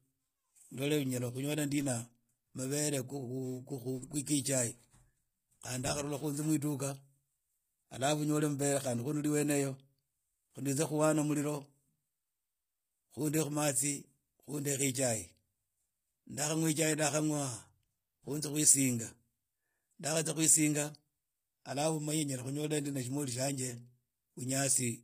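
Throughout the speech, the treble above a crossover sounds bright but synthetic, with s sounds turning gritty and lispy and nothing above 15.5 kHz. Unlike a plain low-pass, the top isn't dull. It is likely HE-AAC compression rebuilding copied bands, consistent with roughly 24 kbps.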